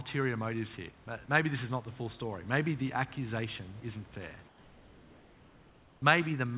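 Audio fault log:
1.04 s, sound dropped by the voice detector: Just after "motives here", the sender's voice detector likely judged the trailing sound to be background and briefly stopped sending. The receiver played about 20 ms of comfort noise in its place, so roughly 10 ms of real sound is missing. The lost sound gives way to steady noise, then normal sound resumes as soon as the detector fires again.
4.48 to 6.02 s, comfort noise in place of the background: After "the accusation isn't fair", the sender went into discontinuous transmission and likely sent only occasional background updates. For about 1.5 s the receiver generated synthetic noise shaped to match. The real room noise, about 27 dB below the loud speech, gives way to a steady, featureless hiss about 2 dB quieter, so the pause sounds smoothed over. This lasts until the sound returns at 6.02 s. Throughout the clip, the narrowband call codec leaves nothing above 4 kHz.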